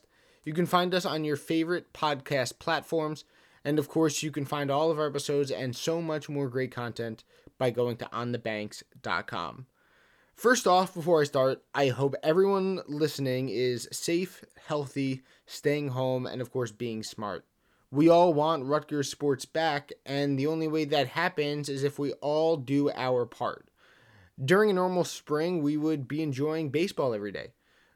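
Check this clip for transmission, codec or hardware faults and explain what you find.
No faults turn up anywhere in this recording. There is nothing to single out at any point in the speech.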